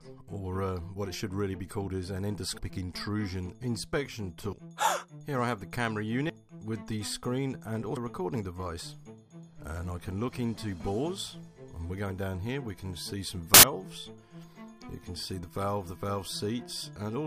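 The audio jumps ahead at 2.49 to 2.77 s, 4.44 to 4.62 s, 6.02 to 6.30 s and 7.97 s. These are compressed frames skipped: roughly 100 ms goes missing at each of the first three, about 200 ms at the last. At 13.54 to 13.77 s a burst of error noise reaching about -5 dBFS comes from a corrupt FLAC frame. Damaged bits threw off the prediction, and the length suggests several frames were hit.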